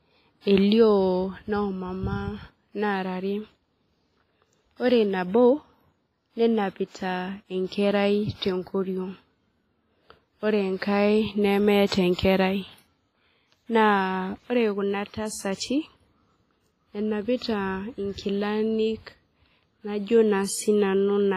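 From start to finish the speech has a ringing, washy quality, with hiss that swells and fades with the level and nothing above 15.3 kHz. This is likely WMA compression, and the heavy damage fits a low bitrate of around 24 kbps. Unlike steady broadband noise, this hiss follows the signal.

From 11.87 to 11.92 s, pre-echo appears: a short hiss spreads about 53 ms ahead of a sharp onset, blurring its attack. The transform block's quantisation noise, scaled for the loud event, leaks backwards into the quiet gap, unlike reverberation, which trails after a sound.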